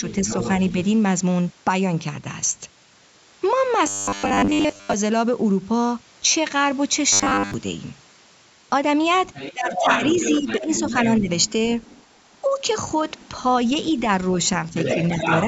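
Other side's voice leaking through, from 0.08 to 0.72 s, sits about 10 dB under the speech. It likely comes from the far end's loudspeaker reaching the microphone and surviving the echo canceller. It returns from 9.16 to 13.93 s and from 14.76 to 15.44 s, now only about 5 dB down and more intrusive.

Robotic sound from repeated short buffers appears from 3.87 to 4.94 s and again from 7.13 to 7.54 s. The speech turns into a rigid metallic buzz at 100 Hz, which fits roughly 10 ms of audio being looped while most of the real signal is skipped. The likely cause is audio arriving too late to fill each buffer.

Speech suppressed in double talk overlaps the longer leak, at 9.53 to 9.85 s and 10.41 to 11.29 s. The near-end speech dips by up to about 15 dB and then about 10 dB. From 14.74 to 15.25 s there is a shallower dip of about 5 dB. This is likely the echo canceller turning down everything while both sides talk at once.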